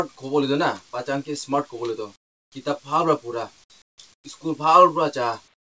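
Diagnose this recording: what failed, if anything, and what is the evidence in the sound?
In the quiet gaps at 2.16–2.52 s, 3.82–3.98 s, 4.14–4.24 s and 5.54 s to the end, the background turns smooth and featureless and falls by about 15 to 23 dB, with the real ambience returning once the sound resumes. This is comfort noise in place of the background, likely from discontinuous transmission in the call processing. The sender stops transmitting during silence, and the receiver synthesises a plain noise bed, band-limited like the G.722 audio around it, with nothing above 8 kHz.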